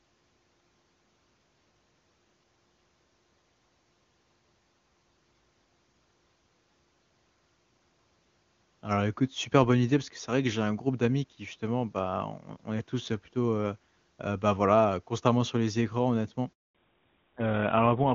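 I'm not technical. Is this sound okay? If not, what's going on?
No. Right after the speaker says "sur les écrans honnêtement", at about 16.53 seconds, the voice cuts out completely for roughly a fifth of a second, until 16.75 seconds. This is a handover gap: the phone was switching the call from one network connection to another, and during that brief changeover no sound reached the other end. Anything said in that moment is simply gone.

When the voice returns at 16.75 seconds, it sounds duller, flatter and rougher for the rest of the clip. Up to that point the call used HD Voice, which gives a clear, full sound. This is a fallback to narrowband: after the switch, the call dropped to an older GSM phone standard that can't carry anything above 4 kHz. That cuts off the crisp upper part of the voice, leaving the muffled sound of an old-style phone call.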